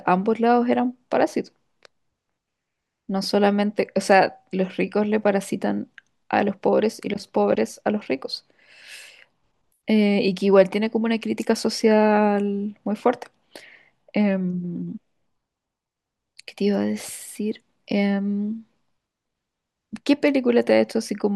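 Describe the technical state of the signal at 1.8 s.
At 1.8 s the speech signal is intact, with no audible fault at that moment.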